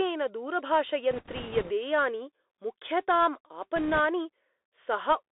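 Throughout, the speech passes through the Bluetooth CVSD headset codec, which fits a 64 kbps link. The band runs from 300 Hz to 3.7 kHz, with scratchy s sounds and a granular hiss. A spectrogram shows an empty region above 3.7 kHz.

From 1.11 to 1.72 s and from 3.76 to 4.00 s, bit errors on the Bluetooth voice link add a rushing crackle. It is heavier in the first burst, with roughly 5% of bits flipped, against about 3% in the second. The bursts appear as grainy in-band noise, without tall click spikes in the waveform.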